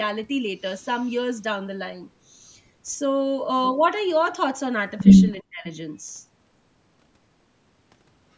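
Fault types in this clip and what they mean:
Speech suppressed in double talk: Between 5.38 and 5.68 s the speech is pushed down hard, by about 40 dB at its deepest, for roughly a third of a second. This is likely the echo canceller reacting to both ends talking at once: unable to separate the local talker from loudspeaker echo, it attenuates everything on the send path, so the voice fades sharply and returns once the overlap ends. The call microphone processing band-limits the audio at 8 kHz.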